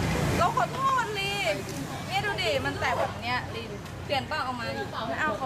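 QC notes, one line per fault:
0.89–4.86 s, clock drift buffer slips: about five regular clicks every 0.99 s, likely a roughly 400 ppm clock mismatch dropping or repeating some 15 samples each time.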